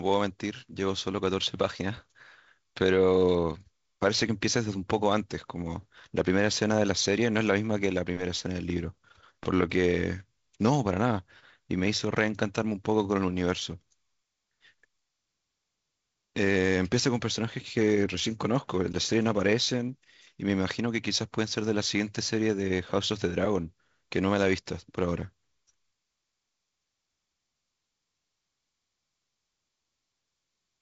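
No technical faults can be heard anywhere in this speech, which carries the usual light character of G.722 wideband telephone coding with nothing above about 7.7 kHz.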